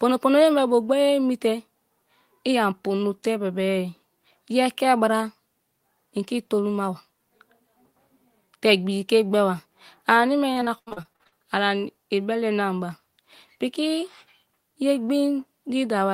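From 10.53 to 11.35 s the speech turns choppy and robotic: repeated packet loss, with about a dozen short holes, the longest 81 ms, each patched by stretching the preceding sound. Around 40% of that span is concealment, showing as smeared, repeated harmonic bands and abrupt waveform breaks.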